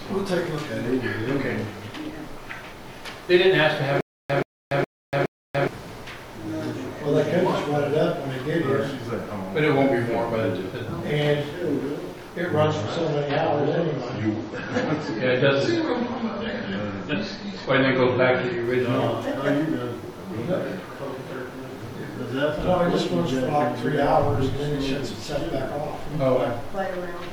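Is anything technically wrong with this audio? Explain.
Yes, there are two faults.

From 4.01 to 5.68 s there is a stutter with silent gaps. A 129 ms fragment repeats four times, every 417 ms, with about 288 ms of dead digital silence between repeats. The likely cause is a stalled player replaying its last buffered fragment at each retry, so the audio meant for that stretch is lost.

From 12.64 to 18.64 s the sound turns abruptly dull and smeared, with nothing above 7.9 kHz and stronger codec artefacts. Quality changes without any gap. This is an adaptive stream at a lower bitrate: the stream switched to a cheaper rendition while the connection slowed, which fits a drop from a 128 kbit/s MP3 to one around 32 kbit/s.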